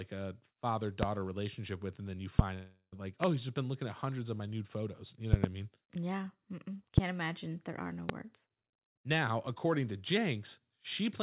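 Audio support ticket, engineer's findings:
Loud pops at 1.03–1.05 s (after "a father"), 2.39–2.42 s, 3.24–3.26 s (before "he's just been looking"), 5.33–5.46 s (double, before "mean yeah"), 6.98–7.00 s, 8.09–8.12 s. Each is about 20–25 dB above the audio. Likely voltage transients from a plug, switch or static.

Long network dropout at 2.54–2.94 s. About 0.38 s of audio was lost. The receiver filled the gap with decaying concealment noise and briefly went silent before the stream resumed, with that section missing. The 4 kHz ceiling from the G.711 call path can still be heard.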